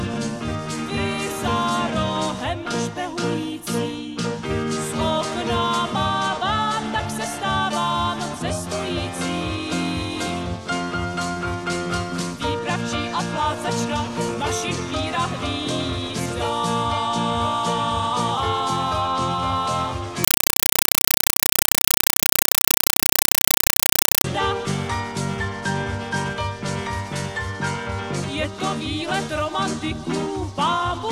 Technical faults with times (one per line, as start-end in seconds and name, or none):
20.24-24.24 compressed stream played as audio